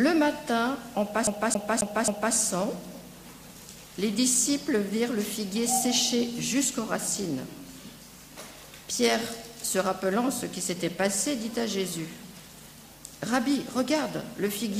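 From 1.27 to 2.35 s the CD is stuck on one turn: a 269 ms slice repeats four times with brief mutes, an even mechanical stutter unlike irregular digital dropouts.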